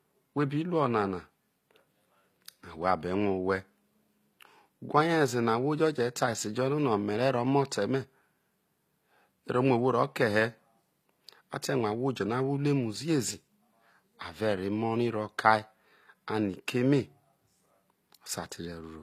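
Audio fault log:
throughout: HE-AAC compression, likely the cause of plainly audible codec damage, fitting a bitrate near 24 kbps. The treble is rebuilt from copied lower bands, so harmonics misalign and s sounds turn gritty, metallic or lispy. A spectrogram shows repeated treble patterns, nothing above 14.9 kHz.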